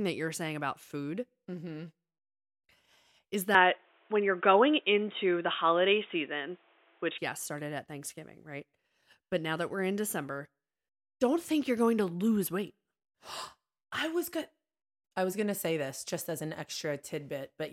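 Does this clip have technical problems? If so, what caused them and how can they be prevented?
Yes. From 3.55 to 7.18 s the input likely switched to a poorer device. The sound turns dull and boxy with nothing above 3.8 kHz, the level shifts by roughly 5 dB, and a faint new noise floor appears. The switch comes just before "yes started at". Locking recording to one microphone and disabling automatic device switching or headset call profiles prevents this.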